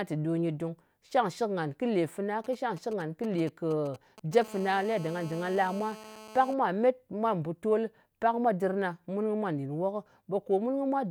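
A galloping dit-dit-dit of short buzzes cuts through the speech from 2.44 to 4.43 s, roughly 20 dB below it. These are GSM signalling bursts: a nearby 2G phone sends brief groups of radio pulses at a 217 Hz rate while it signals, and the audio circuit rectifies them into sound. At 4.44 s this turns into a steady, hard, raspy buzz, GSM phone buzz, lasting until 6.54 s at about 18 dB below the speech. Once the phone is in a call it transmits in bursts 217 times a second, and the rectified pulses produce a harmonic-rich tone unrelated to the speech.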